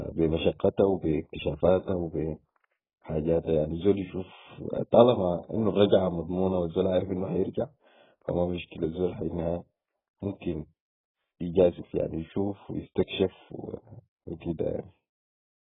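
From start to finish the speech sounds dull and smeared, with a watery warble on sustained vowels and a fizzy edge on sibilants. That points to heavy AAC compression, likely AAC-LC at a very low bitrate near 8 kbps. Starved of bits, the encoder drops everything above 3.8 kHz. On a spectrogram there is a hard ceiling at 3.8 kHz and blotchy, patchy energy below it.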